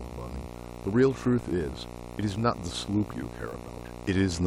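A steady 60 Hz buzz with hash above it runs under the speech throughout, about 15 dB down: video or display buzz from a screen or video cable coupling into the audio.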